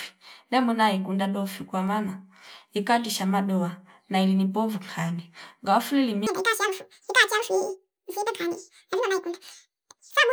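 From 6.27 s, right after "povu kani ngawa fuli", and running to the end, the speech plays at double speed, a clear case of audio read two samples at a time. The reader took each pair of samples as one frame, so the playback races and the pitch jumps 12 semitones, a full octave. A spectrogram shows harmonics spread twice as wide and formants pushed upward, with syllables squeezed to half their width.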